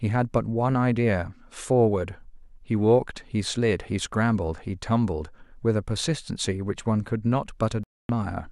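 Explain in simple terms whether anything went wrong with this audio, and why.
A Bluetooth stall hits near the end of this speech clip, from 7.84 to 8.10 s, where the sound drops to complete silence for about a quarter of a second and then carries on. This is likely a wireless hiccup: interference delayed the audio travelling from the phone to the headphones, so the small store of sound the headphones keep in reserve ran out, and playback paused until the missing pieces were sent again and arrived.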